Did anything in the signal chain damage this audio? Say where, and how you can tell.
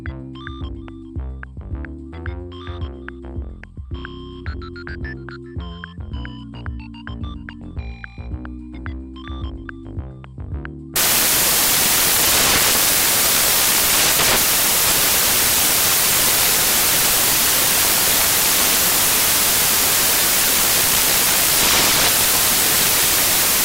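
Yes. The damage sits at the sample-format conversion stage: from 10.96 s to the end of the clip at 23.65 s, the samples are built from the wrong bytes. The reader assembles each value misaligned or byte-swapped, so the rapidly changing low-order bits land in the most significant position. That turns the signal into loud, harsh broadband noise, close to white on the louder passages.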